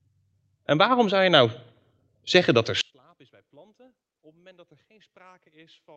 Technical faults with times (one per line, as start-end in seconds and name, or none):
2.81-5.97 audio dropout to a faint residue